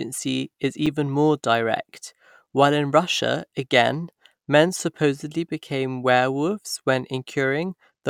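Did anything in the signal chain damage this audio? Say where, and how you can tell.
Yes. The driver or buffer stage left a 5 ms block of digital silence at 0.86 s, just before "more direct while in". The abrupt drop to zero and back clicks as a tick.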